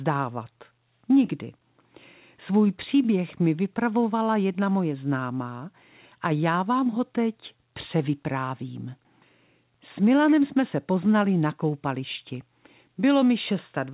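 No faults detected in the speech; the call path carries nothing above 4 kHz, which fits a G.711 A-law narrowband link and is expected for that channel.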